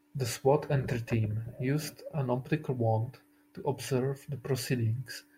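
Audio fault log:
Listening through this speech recording, nothing stood out as wrong.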